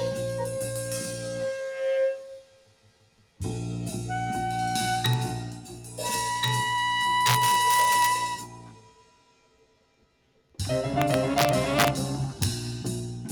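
A noise suppressor applied to music or sounds runs through the whole clip. A speech-oriented suppressor has been left active, so it treats sustained material and decay as noise. Its gain moves over a range of around 10 dB. Onsets pass while the held portions underneath are pulled down, which gives the sound a pumping, thinned character as the gain rises and falls.

The first cases of sound cut by the noise suppressor fall at 0.47 to 1.84 s (drop of about 7 dB), 2.11 to 3.4 s (about 11 dB) and 5.54 to 5.99 s (about 9 dB). In each stretch the suppressor has classed steady content as noise and attenuated it harder than its surroundings. Sustains sag and tails are truncated, while transients still come through.

Integer overflow appears from 7.26 to 8.06 s, with the signal driven about 3 dB past full scale. Instead of being clamped, peaks beyond the integer limit wrap around to the opposite extreme. 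Each excursion becomes a full-range jump, heard as harsh, splintering cracks on the loudest parts, far more abrupt than ordinary clipping.

Another suppressor cut spans 8.33 to 10.59 s, reaching about 11 dB. Sustained content sinks noticeably and decays are chopped short.

The overflow returns from 11.02 to 11.88 s at about 4 dB over, producing violent cracking. A final brief overflow lands at 12.42 s, about 1 dB over.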